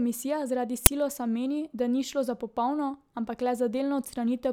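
At 0.86 s, just before "meni da ni šlo", an uninitialised buffer plays. A block of audio memory was sent to the output before any speech had been written into it, so leftover contents were read out as if they were samples. The result is a loud crack lasting about 10 ms. On the waveform it shows as a brief wall of jagged values, and on the spectrogram as a thin vertical band of broadband energy.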